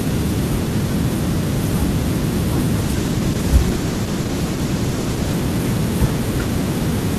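A call bitrate drop runs from 2.82 s to 5.41 s. The sound is consistent with the connection's bandwidth estimate collapsing, with the encoder falling from around 48 kbps to roughly 14 kbps and staying at that floor for about 2.5 s. With so few bits, the codec quantises the speech coarsely and trims the upper frequencies, so this stretch turns muffled, rough and watery before the fuller sound returns at 5.41 s.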